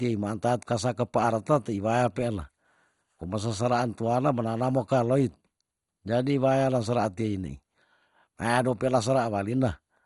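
Throughout, the speech sounds dull and gurgling, with nothing above 11.2 kHz. Likely MP2 compression short of bits, fitting about 56 kbps, which switches upper bands off.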